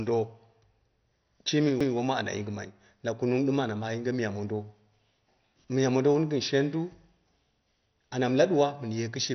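Speech runs through the whole clip with a dull, gurgling, granular texture and nothing above 6.2 kHz, which points to heavy MP2 compression at a low rate, likely somewhere around 48 kbps. Layer II starves its upper sub-bands of bits and switches them off, so the spectrogram shows a hard ceiling at 6.2 kHz, with patchy blocks flickering in and out just beneath it and coarse, smeared energy in the bands that remain. At 1.80 s a CD skip interrupts the speech with a brief tick: the player mutes for only a few milliseconds and then resumes from a different point on the disc, so the sound jumps abruptly rather than continuing. In the waveform this is a near-flat gap of a few milliseconds followed by a discontinuity, and on the spectrogram it is a thin vertical stripe with mismatched material on either side.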